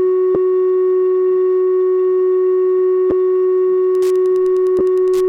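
Lost LE Audio frames break into this music at 0.35 s, then at 3.10 to 3.12 s and 4.79 to 4.81 s. Each gap of about 10 or 20 ms, which fits one or two dropped 10 ms frames, is patched by the LC3 decoder repeating the last spectrum with scrambled signs, so tones briefly smear into a noisy blur. Wi-Fi interference runs from 3.91 s to the end: a nearby radio's beacon every 102.4 ms is rectified by the audio circuit into steady ticking about ten times a second, roughly 30 dB below the music.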